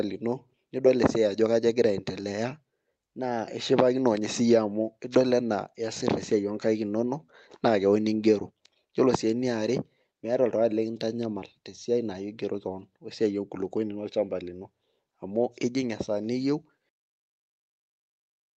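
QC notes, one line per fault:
No faults are audible in the speech. It has come through a WebRTC call path, and the top end stops at about 8 kHz, which fits an Opus call at around 32 kbps.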